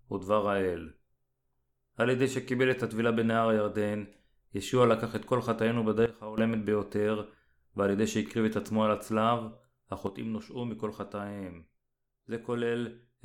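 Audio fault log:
6.06–6.38 s and 10.07 s to the end: sudden gain jump. The sound and its background noise drop together abruptly, by about 14 dB in the first span and about 6 dB in the second, most likely from a gain change applied between samples without any ramp.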